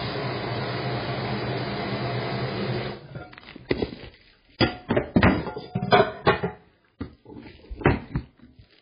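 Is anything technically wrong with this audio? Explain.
Yes. Throughout the clip, the sound has likely passed through heavy MP3 compression at a very low bitrate, which fits roughly 16 kbps. With so few bits available, the encoder cuts the treble at a fixed point and discards weaker frequency lines, bringing them back in some frames and dropping them in others. Nothing is heard above about 5 kHz, so the audio sounds dull and boxed-in. The flickering lines give it a watery, swirling texture with metallic chirps, and sharp attacks sound smeared.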